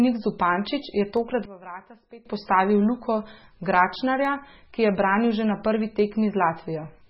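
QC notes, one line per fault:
Throughout: MP3 compression, heavy damage; watery, swirly speech with smeared attacks, likely a very low bitrate around 16 kbps. Spectrogram shows flickering holes.
1.17 s and 4.25 s: dropped samples, a fraction of a millisecond missing each time, the second just before "ki je branil že"; single sharp clicks, likely from lost samples, seen as thin vertical lines and waveform jumps.
1.45–2.25 s: one channel inverted; the speech drops about 18 dB in mono, leaving a faint residue, likely from reversed polarity on one side.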